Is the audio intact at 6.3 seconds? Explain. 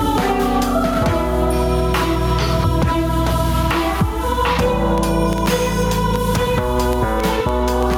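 No. At 6.3 seconds the music is pumping: the gain swings by around 10 dB, leaving the sound flattened and squashed. The likely cause is gain set far too high, with a fast limiter or compressor clamping down on each peak.

A train of clicks also runs over this moment, from 4.98 to 7.95 s. About fifteen similar ticks arrive at an uneven pace averaging 4.4 per second, peaking roughly 10 dB above the music and audible in the pauses too. They likely come from interference or a faulty connection injecting repeated pulses.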